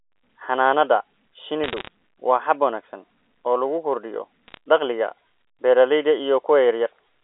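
Telephone speech, band-limited to roughly 300 Hz to 3.5 kHz. Bit errors on a digital phone line cause sharp ticks and crackle from 1.64 to 1.88 s and from 4.48 to 4.57 s. Each flipped bit corrupts one sample, at an error rate somewhat under one percent.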